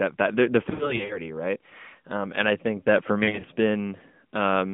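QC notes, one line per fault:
0.70–1.21 s, lost AMR speech frames: just after "that the the", about 200 ms of audio drops out in short bursts spread across 0.4 s, the longest gap 60 ms. The decoder fills each gap by repeating the last good pitch and spectral shape at falling gain, so the sound warbles and dips. A spectrogram shows smeared, flattened harmonics and brief energy notches. The waveform shows amplitude sagging between intact frames.
3.24–3.46 s, lost AMR speech frames: after "I think that for", about 120 ms is lost in bursts over 0.2 s, the longest gap 40 ms. The gaps are shorter, so the sound gives quick dips or warbles rather than fades. A spectrogram shows frozen harmonic stripes inside the 150 Hz–3.6 kHz narrowband line. The waveform shows small gain dips where concealment runs.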